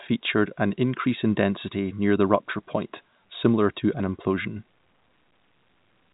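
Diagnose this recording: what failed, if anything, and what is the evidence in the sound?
Nothing failed; no faults present.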